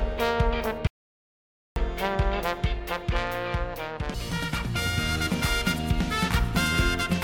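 An audio dropout to silence runs from 0.87 to 1.76 s. The sound stops abruptly and about 0.89 s of silence follows, with no room tone. The input was likely lost while recording continued writing silence, so that stretch is gone entirely.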